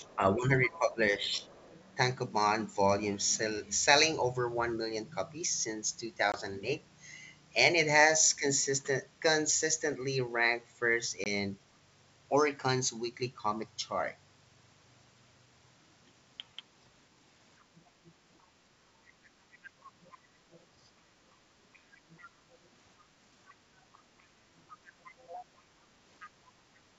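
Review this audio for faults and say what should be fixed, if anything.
Other side's voice leaking through. A second, fainter voice sits under the speech from 0.0 to 1.89 s and from 17.6 to 18.12 s, roughly 30 dB down. It returns from 19.52 to 20.64 s at roughly 25 dB down. From 21.73 to 26.3 s it is stronger, roughly 20 dB down. This is likely loudspeaker echo that the canceller failed to remove from the microphone. It rises in level toward the end. Prevention: improve echo cancellation and residual echo suppression on the talker's device.

Speech suppressed in double talk. From 0.0 to 1.96 s the talker's level sags while the leaked voice is present. The deepest dip is roughly 10 dB, across about a second in total. From 19.91 to 20.89 s the dips are sharper, roughly 20 dB, in short pieces of about 0.2 s in total. The likely cause is the canceller treating both voices as echo and turning everything down. 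Prevention: tune double-talk detection so near-end speech is never attenuated.

Packet loss on an ADPCM call. Two hard-edged holes appear, at 6.32 to 6.36 s and at 11.24 to 11.27 s. Each is a 20 ms gap, which points to one lost packet. Silence fills each gap. The decoder's predictor and step size then no longer match the sender's. So the sound comes back slightly distorted before it settles. Prevention: use packet loss concealment and resynchronise decoder state after a loss.

Background gated by the echo canceller. At 21.39 to 21.55 s the room sound drops by about 11 dB for about 150 ms, then comes back. The canceller clamped the microphone while the loudspeaker was active. It released soon after. The background noise dips and returns. The G.722 wideband coding at 64 kbit/s shows at most faint damage through this stretch. Prevention: use comfort noise injection instead of hard attenuation during echo suppression.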